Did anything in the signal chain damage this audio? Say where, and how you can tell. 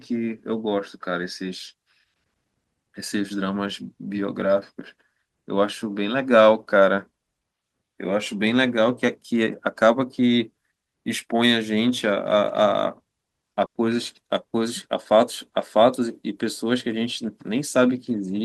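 Yes. At 13.65 s the speech stops advancing and the last sound is stretched out and fades away, with about 80 ms of near-silence, before the speech picks up again at 13.77 s. That is a burst of packet loss at the network stage. A run of packets arrived too late or never arrived, so the receiver filled about 100 ms by repeating the last audio and turning it down. Roughly 100 ms of the original speech is missing, and the talker jumps ahead when the speech resumes.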